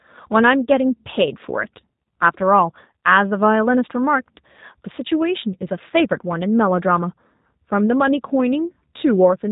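From start to finish the speech carries G.729 codec damage, and it's plainly audible. Nothing gets through above about 3.8 kHz, and voices are rebuilt from a filter, a pitch predictor and a few pulses per frame, which fits 8 kbit/s G.729A and leaves them rough and a bit synthetic.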